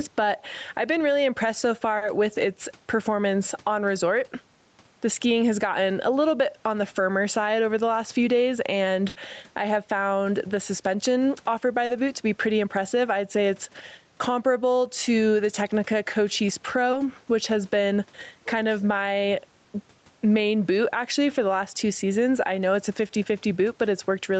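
Gain pumping is present across the entire recording. The level swings by around 10 dB as the gain is pulled down on loud sounds, so loud and quiet passages sit unnaturally close in level. The likely cause is input gain set far too high, with a fast limiter clamping down on every peak.

At 1.97–2.03 s there is a short concealed packet loss. About 40 ms of audio arrived too late to decode, and the receiver extended the preceding sound to cover it before blending back, which leaves a brief smear.

At 9.09–9.17 s, between "the last few days" and "I have found the", a burst of packet loss removes about 60 ms. The concealment stretches the last sound and fades it, so a held buzz or decaying hiss stands in for the missing material before the audio jumps ahead.

Further short concealed packet losses occur at 11.85–11.91 s, between "found the suspension offered" and "boot to be pretty", lasting about 40 ms, and at 16.91–16.95 s, just before "which has been kind", lasting about 20 ms. 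Each is heard as a momentary wobble where the concealment patched the gap.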